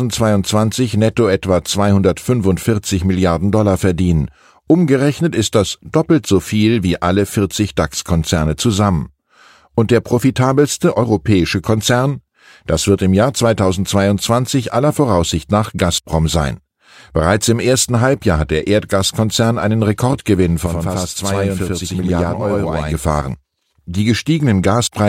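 From 20.66 to 22.95 s the speech picks up a channel delay (doubling): one side runs about 93 ms behind the other, which fits a 4096-sample buffer, and once they're folded to mono you hear a same-level slap echo trailing every syllable.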